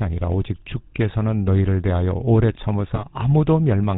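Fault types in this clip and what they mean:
GSM full-rate codec: Throughout the clip, the speech has a buzzy, gravelly roughness that fits the old 13 kbps GSM full-rate codec. The codec rebuilds the voice by driving a model of the vocal tract with a sparse, regularly spaced pulse train. The coarse excitation gives the speech its grainy, rasping texture. Nothing survives above 4 kHz, so sibilants and breath lose their brightness. The damage is plainly audible from start to finish.
GSM bit errors: From 2.94 to 3.03 s the speech suddenly breaks into a short burst of squawking, popping and gargling distortion. This sounds like corrupted bits reaching the GSM decoder, consistent with an error rate of roughly 1.4 percent across a few consecutive frames. The damaged parameters controlling spectral shape, pitch and gain make the decoder produce a warped spectrum and jumps in level for those frames before normal decoding resumes.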